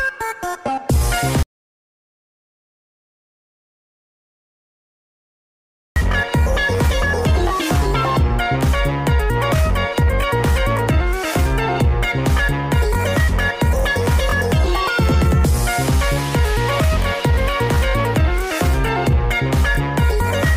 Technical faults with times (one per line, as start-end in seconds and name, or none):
1.43-5.96 audio dropout to silence